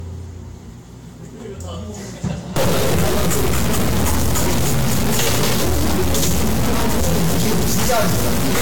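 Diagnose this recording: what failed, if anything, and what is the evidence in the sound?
The codec stage failed. Across the whole clip the sound is swirly, smeared and hollow, attacks blur, and nothing reaches above 19.2 kHz. The likely cause is generation loss from about four lossy Vorbis passes near 75 kbit/s. Each pass requantises on a shifted frame grid, so noise and spectral holes stack.

The converter or its data wiring failed. From 2.56 s to the end at 8.62 s, distortion rides on the sound, and quiet stretches fill with noise. This is likely a stuck bit. One data bit holds a fixed value, so about half the samples are off by that bit's weight.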